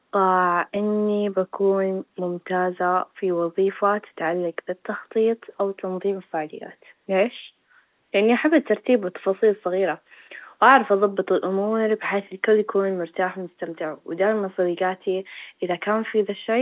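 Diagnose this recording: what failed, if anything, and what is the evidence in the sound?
Nothing failed in this recording; the speech comes through the A-law telephone coding path as that path is meant to sound, with no evidence of a fault.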